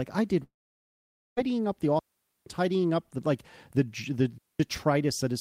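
Right after "I did", at 0.43 s, the speech breaks off until 1.39 s. The last sound trails on as a fading buzz, then near silence. This is likely a long network dropout. About 0.94 s of audio never arrived, and speech resumes at "up the".

Two digital wireless dropouts follow. From 1.99 to 2.46 s, after "up the", and again from 4.38 to 4.60 s, the link lost too much data and the receiver muted. Each is a clean hole of near silence, with no noise at either edge.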